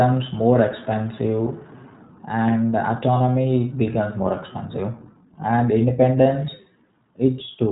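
From start to finish, the speech carries the sound of the iLBC codec. This narrowband VoIP coder squeezes each short frame on its own, without drawing on the one before. Here the top end stops at about 3.8 kHz, so sibilants lose their sparkle and the voice sounds boxed in. The damage is plainly audible: a rough, slightly synthetic edge. The texture fits 20 ms frames at around 15.2 kbps.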